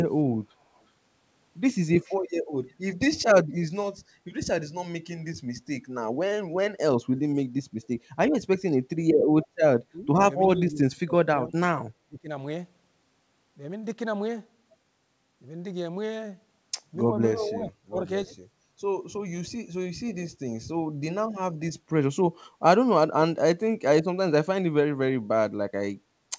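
Echo leak, at 0.75 to 0.8 s and again at 2.04 to 2.16 s: a faint delayed copy of the speech surfaces about 363 ms after the original, very quiet at first and somewhat louder in the second scrap, though still well below the talker. The likely cause is a far end playing the call on a loudspeaker whose echo canceller let a little of its microphone pickup slip through and return down the line.

Speech suppressed in double talk, at 9.92 to 10.08 s, 10.56 to 11.56 s, 12.05 to 12.29 s and 17.36 to 17.96 s: the talker's level sags in patches while the other side is speaking. The first dip is shallow, about 10 dB, and the later ones dig deeper, about 20 to 25 dB, leaving the speech thinned or briefly gone. This is likely an echo canceller that could not tell its own talker from loudspeaker echo and turned everything down.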